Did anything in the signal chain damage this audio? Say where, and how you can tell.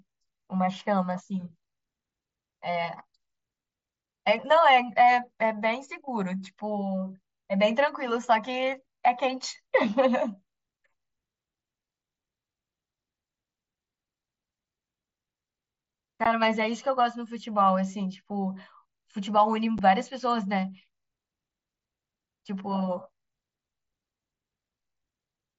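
Yes, on the Bluetooth link between headset and phone. Unconcealed Bluetooth headset packet loss leaves two abrupt-edged holes in the speech: 15 ms at 16.24 s and 7.5 ms at 19.78 s. Their lengths fit whole 7.5 ms mSBC frames being dropped and replaced with silence, not concealed.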